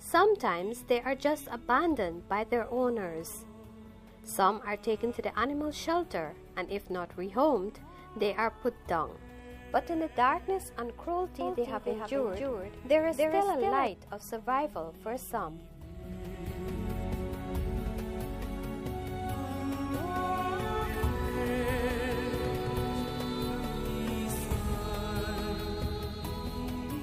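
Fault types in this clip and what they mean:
Doubled audio track: from 11.41 to 13.87 s a second full-band copy of the sound runs roughly 300 ms behind the original, about 5 dB quieter, with no decay or room colour, and it cuts in and out abruptly. The likely cause is a slower second capture path or an edit holding two out-of-step copies. On a spectrogram every event has a fainter twin shifted right; the waveform shows repeated transients at that fixed spacing.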